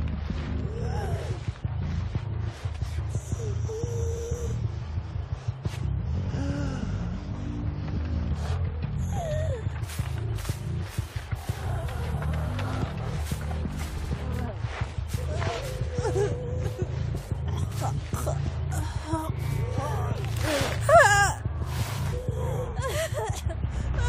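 At 13.97 s the sound stutters, a fragment of about 70 ms heard three times in quick succession before playback moves on. This is repeated frames: a short run of compressed data, consistent with a few frames, was played twice more, lengthening the audio by 139 ms.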